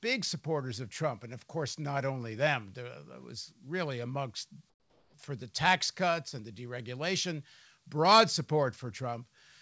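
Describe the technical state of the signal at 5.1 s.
At 5.1 s we're near the end of a comfort noise in place of the background stretch, running 4.70 to 5.14 s between "was really amongst" and "for the tax cuts". The sender likely stopped transmitting in the pause, so the receiver filled it with a flat, featureless hiss about 7 dB quieter than the real room tone.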